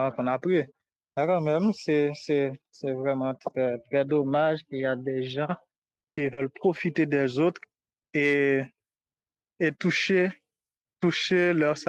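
From about 5.49 to 6.43 s the speech hits repeated packet loss, which gives it that robotic sound. Audio kept going missing in quick succession, five holes across less than a second, the longest about 60 ms. Each gap got patched by stretching the last bit of sound, so roughly a fifth of that stretch is filler. You hear it as choppy speech with small chunks dropped out.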